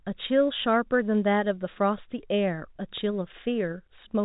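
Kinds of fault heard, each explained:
No faults are heard.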